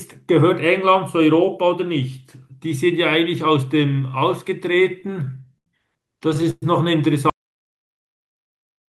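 Packets reaching the receiver late, again and again, drained the jitter buffer between 4.83 and 5.68 s of this speech recording, producing repeated stalls (stutter): eight short gaps were filled by continuing the last sound, about 147 ms in all and the longest 81 ms, roughly a sixth of that stretch, so the speech drags and stutters while nothing is lost. At 6.50 s a call audio freeze follows, most likely from packets held up in transit emptying the buffer once more; the last sound is held for about 119 ms and fades into a brief silence of around 10 ms before the speech resumes where it left off, now pushed later by that amount. From 7.30 s to the end the signal drops to silence with no room tone, an audio dropout to silence whose likely cause is the input being lost, so whatever followed is gone.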